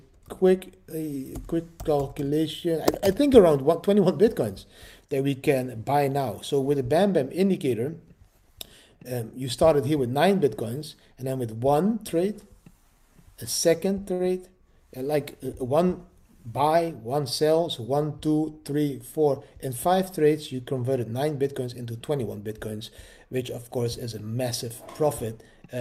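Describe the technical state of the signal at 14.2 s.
At 14.13 to 14.21 s the signal shows a short stall from a late packet. A packet arrived after its playout deadline, so the jitter buffer underran and the receiver extended the last available sound for about 61 ms until the data turned up, then resumed from the same point. Nothing is dropped, but playback is now running 61 ms later, and the held segment comes across as a brief unnatural sustain with a faint buzzy or dipped texture.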